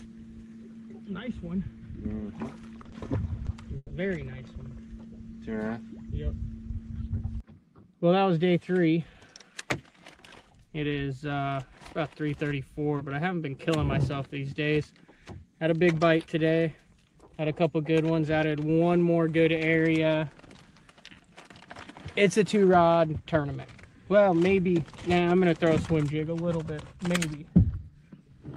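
Repeated stalls (stutter) from 2.81 to 3.93 s: late packets emptied the jitter buffer four times, and the receiver stretched the last sound for 220 ms in total, up to 140 ms at once, so the audio drags.

Jitter buffer speed-up from 9.13 to 9.85 s: with too much audio queued, the receiver cut around 70 ms of pitch periods, so the sound runs at 109% speed, hurried but unchanged in pitch.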